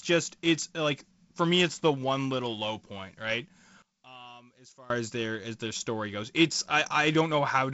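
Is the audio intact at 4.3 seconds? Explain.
No. A one-channel-inverted fault runs from 3.82 to 4.90 s, just after "little low point right" and ending before "as their as their". The speech suddenly drops by about 23 dB, as if only a faint residue remains. That is likely a polarity flip on one stereo channel: when the two channels are summed to mono, the content they share cancels, leaving only the small differences between them.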